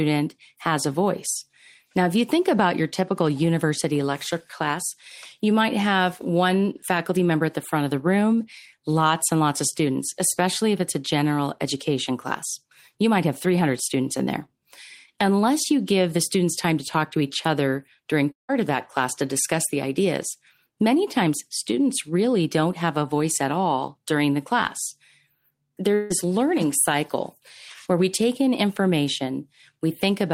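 At 18.31 s the speech breaks off for about 0.19 s. The last sound is stretched into a fading buzz, then about 0.15 s of silence follows before speech resumes with that part missing. At 25.95 s a similar 0.17 s gap is bridged entirely by the fading fill, with no silence. Both are likely long network dropouts. Unlike a brief packet-loss click, the first gap lasts long enough for the concealment to die away, and 0.16 to 0.18 s of speech is gone.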